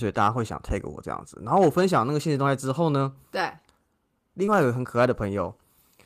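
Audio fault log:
4.45–4.49 s, short concealed packet loss: a quick smear in the speech where 20 ms of audio never reached the decoder in time, so the receiver patched the hole by carrying on the sound just before it, then blended back into the real signal.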